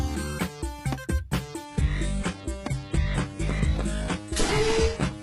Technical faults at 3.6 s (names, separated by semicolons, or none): adaptive stream at a lower bitrate